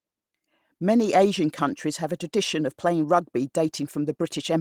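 Nothing in this speech recording stands out as a technical fault at any point, so there's nothing to flag here.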